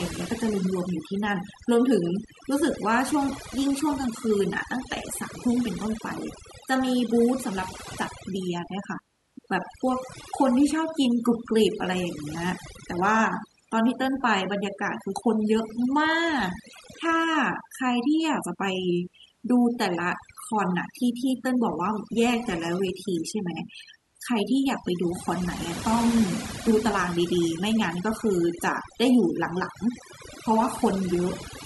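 Throughout the speech, overdone noise removal strips quiet frequency bands, leaving near-silent gaps with twinkling specks; spectrograms show scattered, blotchy holes.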